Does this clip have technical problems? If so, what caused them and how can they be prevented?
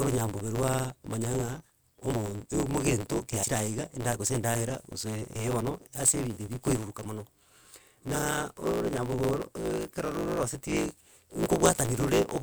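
Yes. A steady buzz at 109 Hz runs under all the speech, and everything moves about 1.16 times too fast while the pitch stays roughly normal. This is a block size mismatch (truncated). One stage writes blocks longer than the next stage reads, so the tail of every block is discarded. That removes slices of audio at a regular rate, which produces the buzz, and the pattern fits a 512-sample write buffer. To prevent it, make sure every stage in the chain uses the same block size.

There are also four brief glitches where the speech jumps forward, at 2.12 s, 3.42 s, 5.35 s and 8.14 s. These are compressed frames skipped. Several 24 ms frames were lost or rejected by the decoder as damaged, so roughly a tenth of a second of audio vanishes at the first two points, around 150 ms at 5.35 s, and about 50 ms at 8.14 s. To prevent it, store and transmit the file with error checking and fix corrupted frames before decoding.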